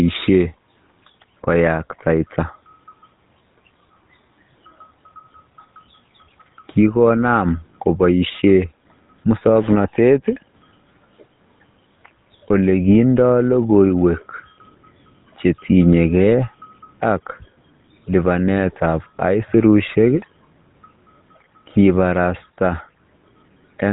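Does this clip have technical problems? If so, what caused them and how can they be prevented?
Yes, the whole recording went through a GSM full-rate codec: coarse vocal-tract modelling with sparse pulse excitation makes the speech plainly buzzy and gravelly, and nothing above 3.8 kHz survives. Avoid it by capturing locally or routing calls over a wideband codec instead.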